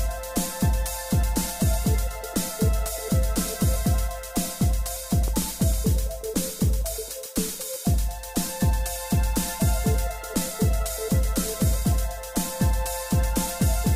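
From 5.28 to 5.44 s, two loud pops, likely from a voltage pulse, sit a few dB above the sound, showing as twin waveform spikes and vertical broadband spectrogram lines.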